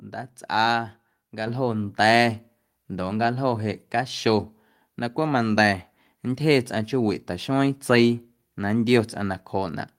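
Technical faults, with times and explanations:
1.47 s, microphone volume stepped up: the call software judged the microphone too quiet and raised the device's input volume in a single step of about 6 dB, so the voice and the background noise both jump louder at the same instant.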